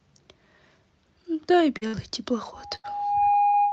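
At 1.77 to 1.83 s a short concealed packet loss drops about 40 ms of speech. The receiver patches it by extending the preceding sound and blending back, so it passes as a quick smear or wobble rather than an audible gap.

Just after, at 1.87 to 1.95 s, comes a burst of packet loss: 60 ms missing. Here the patch is held long enough to be heard as a buzz or hiss that fades before speech resumes further along, with the lost stretch simply gone. That fading and skip-ahead is what separates it from the brief smear before it.

From 2.54 s to the end, a loudspeaker feedback squeal at 820 Hz swells over roughly 0.7 s to sit around 5 dB above the speech. Microphone and loudspeaker have formed a loop whose gain exceeds one at that frequency. Unlike a concealment buzz, this tone is fixed in pitch and grows rather than decays.

Two more bursts of packet loss sit under the squeal, at 2.75 to 2.86 s (80 ms missing) and 3.48 to 3.55 s (60 ms), each a decaying fill followed by a jump forward.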